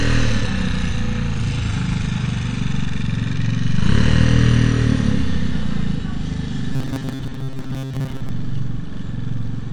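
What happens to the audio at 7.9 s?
At 7.9 s the audio falls inside a stretch of robotic sound from repeated short buffers, running from 6.73 to 8.29 s. New audio is likely arriving too seldom, so playback loops a short fragment of about 7.5 ms again and again while the real sound is skipped. Those repeats cover most of the stretch and lock the sound to a fixed metallic buzz at 133 Hz, which still loosely tracks the underlying sound.

The whole clip also carries AAC compression, with the likely cause being AAC-LC coding at a low bitrate, one consistent with about 32 kbps. The encoder discards frequency detail it judges inaudible and lowers its high-frequency cut-off. At 7.9 s this leaves the sound dull and smeared, with a plainly audible warbling, fizzy texture sitting under the buzz.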